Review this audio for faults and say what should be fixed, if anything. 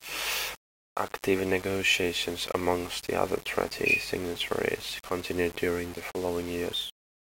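The speech carries grainy distortion for its whole length that rises and falls with the voice. The likely cause is low bit depth without dither. The samples have been rounded to very few levels, which fits roughly 6-bit resolution, and the error sits only about 15 dB below the speech. Because no dither decorrelates it from the signal, the error tracks the waveform as harsh grit, and the quietest passages and decays drop out or sputter between adjacent steps instead of fading smoothly. To prevent this, keep at least 16-bit resolution through the chain and apply dither whenever reducing word length.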